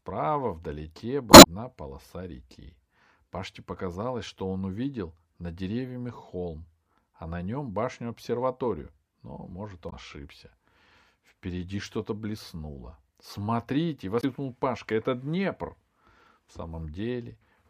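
Speech with damaged data in the compressed stream. Brief glitches break in at 1.29–1.47 s, just before "полоса реки", then at 9.86–9.93 s and 14.20–14.24 s. Corrupted bytes threw the decoder out of sync each time.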